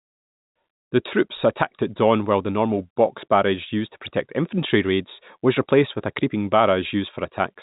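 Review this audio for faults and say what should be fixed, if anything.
No faults; nothing needs fixing.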